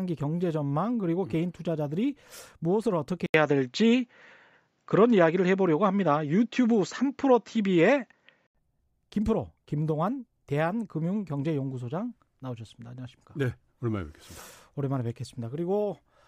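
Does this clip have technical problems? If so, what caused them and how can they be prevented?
Yes. The input likely switched to a poorer device from 3.26 to 8.55 s, so the speech turns dull, with nothing above 7.6 kHz, an 80 ms gap at the switch, a few decibels' level shift, and faint new background noise. Locking the recording to one fixed input device stops mid-take switching.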